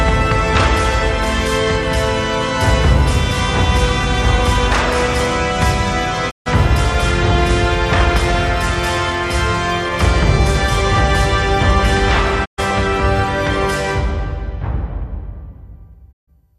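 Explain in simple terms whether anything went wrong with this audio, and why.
Three times the sound briefly cuts out. This is a digital broadcast dropout. The receiver stopped getting good data and went silent until clean data returned. The gaps run from 6.29 to 6.48 s, 12.44 to 12.60 s, and 16.11 to 16.29 s. Each lasts under a fifth of a second. The sound fades out quickly, in about 20 ms, rather than snapping off. Whatever was broadcast during those gaps is gone for good.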